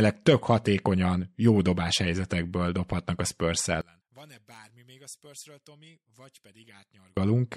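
A speech recording that holds up fine until 3.81 s, when the sound abruptly drops by about 30 dB and stays faint until 7.17 s. That's likely one channel inverted: with one side's polarity flipped, the centred material cancels on a mono sum and only the faint left-right difference survives.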